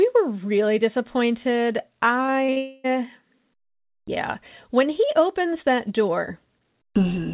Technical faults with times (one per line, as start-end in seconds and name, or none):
2.26-2.58 short concealed packet loss
2.58-2.86 long network dropout